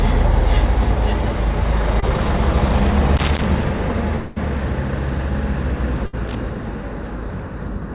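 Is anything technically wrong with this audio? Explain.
Yes. There are four kinds of fault, and they sit on top of a call path whose band ends at 4 kHz, which fits narrowband G.711 coding at 64 kbps.

At 2.00 to 2.04 s there is a short concealed packet loss. About 20 ms of audio did not reach the decoder in time. The receiver patched the hole by extending the preceding sound, then cross-faded back into the real signal. The result is a brief smear or wobble, and whatever detail fell inside those 20 ms is gone.

Loose connector crackle appears twice: from 3.17 to 3.44 s, and again from 6.27 to 6.35 s. A worn or dirty contact is rapidly making and breaking, which chops the signal on and off. Any DC on the line adds pops at each break. Both bursts are heard as irregular scratchy crackle. The first lasts roughly a quarter of a second and the second under a tenth.

From 4.16 to 4.38 s the sound turns into a synthetic continuation of what came just before, a held buzz or hiss that fades over about 0.2 s. 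The signal never drops to silence. When the real sound returns, it has skipped ahead by roughly the same span. This is likely a long network dropout. Audio stopped arriving, and the receiver's concealment covered the whole gap instead of giving way to silence.

From 6.06 to 6.15 s there is a burst of packet loss. About 80 ms went missing, and a gap of roughly 70 ms was concealed by repeating the last sound and fading it down. A voiced sound would come out as a brief held buzz, and other sounds as a decaying hiss. Playback then resumes slightly further on, with the lost section absent.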